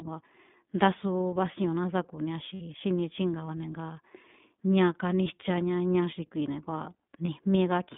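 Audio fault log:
Throughout: iLBC codec. The speech is confined to a narrow band, about 150 Hz to 3.6 kHz, with nothing above. It sounds clearly rough and synthetic. Each 20 ms frame is coded on its own. The sound fits the 15.2 kbps mode.
2.54–2.62 s, 5.24–5.27 s, 7.26–7.28 s: lost iLBC frames. Each gap is filled by a repeated pitch cycle mixed with noise, so it sounds like a briefly held, buzzy vowel. The first lasts 60 ms, which fits three lost frames. The others fit one frame each. The voice is right again almost at once.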